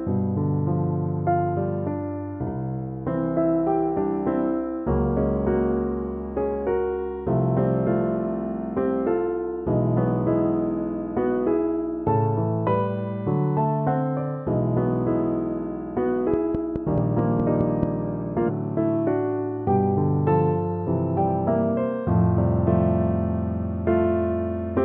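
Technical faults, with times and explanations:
16.34 to 17.84 s, train of clicks: a run of about seven near-identical clicks at an even 4.68 per second, each standing roughly 15 dB above the surrounding sound, so they read as a steady ticking laid on top of the audio rather than part of it. The fixed spacing and uniform shape point to a repeating external pulse, likely interference from nearby equipment or a faulty connection or power supply.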